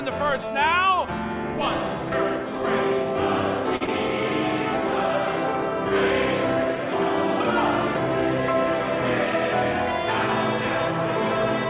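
Call audio with nothing above 4 kHz, consistent with a G.711 mu-law path, has two brief faults in quick succession. From 3.76 to 3.83 s there is a short stall from a late packet. The jitter buffer ran dry, and the receiver held the last sound for 47 ms until the packet arrived, so nothing is lost but the sound drags slightly. Immediately after, from 3.85 to 3.89 s, a short concealed packet loss replaces about 20 ms of missing audio with 22 ms of extrapolated signal, heard as a brief smear before the real audio blends back in.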